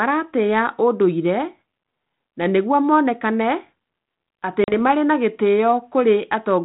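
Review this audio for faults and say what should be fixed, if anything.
Packet loss on an ADPCM call at 4.64 to 4.73 s: about 40 ms of speech, roughly two packets, drops out and is replaced by a hard-edged silence. The G.726 stream runs at 32 kbit/s, and its decoder keeps an adaptive predictor and step size in step with the sender's. The gap breaks that tracking, so when speech resumes at 4.73 s it is briefly distorted until the decoder re-converges over the following tens of milliseconds. To prevent it, improve network QoS and add packet loss concealment that also resets or resynchronises the ADPCM decoder state after a gap.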